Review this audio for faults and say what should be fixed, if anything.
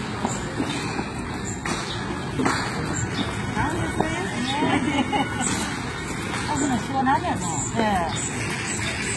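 The signal was likely squeezed through HE-AAC compression at a very low rate, which fits roughly 16 kbps. The coder kept only the lower band and synthesised the treble by copying it upward, so the top end is heavily damaged throughout: gritty, metallic and misaligned, with nothing above 11.8 kHz. Encoding at a higher bitrate with a full-band codec, or keeping an uncompressed master, would prevent this.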